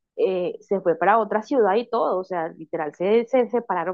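No technical faults can be heard anywhere in the recording. The speech runs from beginning to end without any interruption or disturbance.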